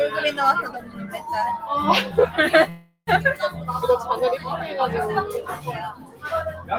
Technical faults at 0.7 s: noise suppressor applied to music or sounds; sound cut by the noise suppressor

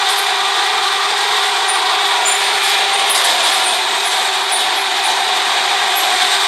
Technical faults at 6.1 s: none

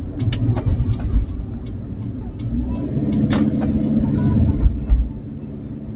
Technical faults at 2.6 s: noise suppressor applied to music or sounds

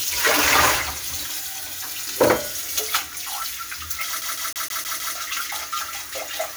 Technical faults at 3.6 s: none

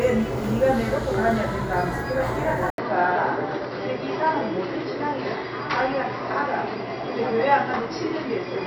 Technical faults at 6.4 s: input switched to a poorer device

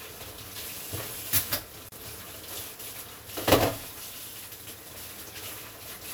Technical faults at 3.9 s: none

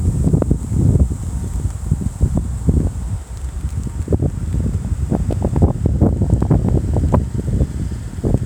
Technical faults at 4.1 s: sample clock jitter

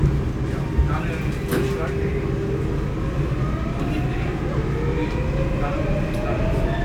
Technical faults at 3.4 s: none

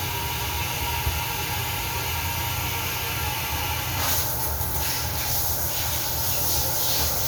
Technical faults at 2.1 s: none

